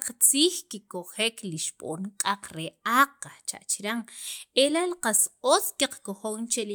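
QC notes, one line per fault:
Nothing stood out on listening to this speech recording.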